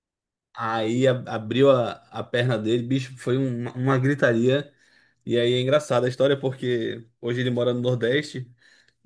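No technical faults are audible.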